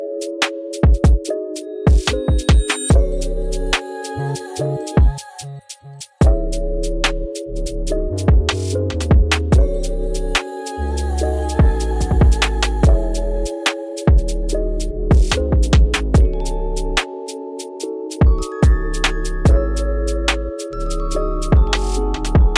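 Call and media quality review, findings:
No faults heard in this recording.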